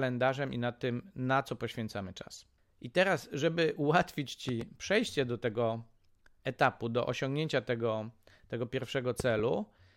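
A loud pop breaks into this speech clip twice, each time as a pair of sharp pops standing well above the talking, by around 10 dB. The first falls between 4.49 and 4.64 s, after "I teraz żeby ułatwić" and before "przejście do tego"; the second runs from 9.20 to 9.42 s, after "do osiągnięcia tego tego". The speech continues beneath both, which points to a sudden voltage step or pulse, likely from a plug, switch or static discharge, added to the signal and shaped by the circuitry downstream.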